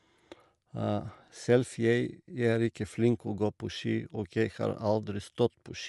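Throughout the speech the top of the spectrum stops cleanly near 11.5 kHz, with nothing above it. The codec damage is plainly audible as a breathy, grainy edge on the voice. The likely cause is Bluetooth LC3 compression, the LE Audio transform codec. It codes the signal in short blocks and, when bits run short, drops fine upper-band detail and fills the gaps with noise. The texture fits 10 ms frames at roughly 48 kbps.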